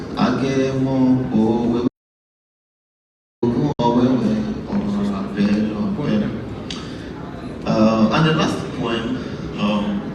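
At 1.88 s the sound stops dead and stays in total silence until 3.43 s, about 1.54 s later, when it resumes just as abruptly. This is an audio dropout to silence. The gap is silent with no trace of room tone or background, so the input was likely lost upstream while the recorder kept writing. Unlike a receiver dropout, it has no fade at either edge, and the hole is far too long to be a few missing frames.

Shortly after, from 3.72 to 3.80 s, a second and much briefer hole appears: a digital broadcast dropout lasting about 64 ms. It fits two frames that failed to decode, after which the receiver muted until clean data returned. It is distinguished from the earlier cut by a very short ramp of about 3 ms into the silence, rather than a hard edge. That ramp is the receiver's muting, not an input that went dead, and whatever was carried in those frames is gone.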